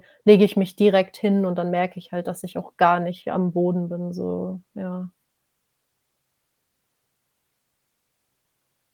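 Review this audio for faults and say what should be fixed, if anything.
I found no faults in the audio, so nothing needs to be fixed.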